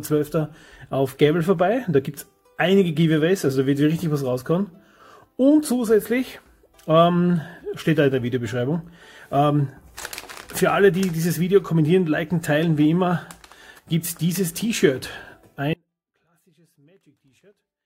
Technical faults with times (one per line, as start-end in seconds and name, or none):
15.73-17.85 audio dropout to a faint residue